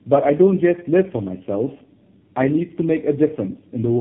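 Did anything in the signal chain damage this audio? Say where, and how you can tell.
Yes. The damage is at the codec stage: tandem speech coding, where the audio passes through three speech coders in a row, the last sounding like low-rate AMR-NB. The speech is rough, muffled and warbly throughout. On a spectrogram, nothing appears above 3.4 kHz, and harmonics and formants look smeared.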